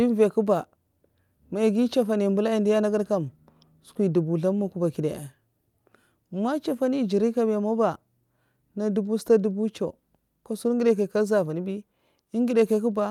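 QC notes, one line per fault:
Nothing stood out on listening to the speech in this clip.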